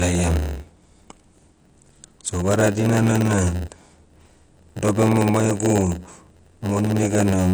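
Throughout the speech, the sound is dull, smeared and fizzy. This is likely AAC compression, at a low bitrate around 32 kbps. A block size mismatch (padded) also runs throughout. Zero-filled gaps in every block cause a buzz at 91.9 Hz, and playback runs at 0.919 speed with unchanged timbre.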